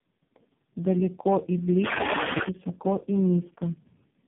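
Tandem speech coding runs through the whole clip. The speech sounds rough, muffled and warbly, with nothing above 3.3 kHz. The damage points to four speech codecs in a row, AMR-NB and CVSD, each re-encoding the previous one's already degraded output.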